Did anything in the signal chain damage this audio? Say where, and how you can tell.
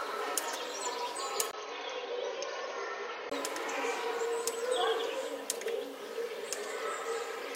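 Yes. From 1.51 to 3.32 s the sound turns dull and boxy, with nothing above 6.4 kHz, a 20 ms dropout at 1.51 s, a few dB less level and a new noise floor about 30 dB down. That's likely an input switched to a poorer device at the driver level.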